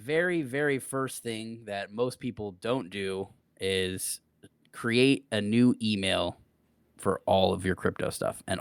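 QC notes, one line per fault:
0.05–4.10 s and 4.81–7.58 s, automatic gain rising: the speech and the background noise behind it swell together, climbing about 8 dB over the first four seconds, then after a short pause climbing again by about 4 dB over nearly three seconds. The automatic gain control judged the input too quiet and raised its gain step by step, so everything in the signal grows louder at once instead of the voice alone.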